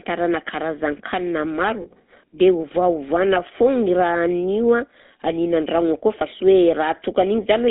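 The whole clip carries the sound of the GSM full-rate codec. The speech is squeezed into a band from about 150 Hz to 3.7 kHz. Its excitation is rebuilt from coarse, regular pulses, giving a plainly audible buzzy, gravelly roughness, which fits a 13 kbps phone channel.

From 1.82 to 1.87 s, just before "dia ovaovana foagna i", there are lost GSM frames. The decoder holds the last good sound. A brief metallic ring replaces 40 ms of speech, which fits two lost 20 ms frames. A shorter ring follows at 6.38 to 6.41 s, just after "akao fa", matching one lost frame.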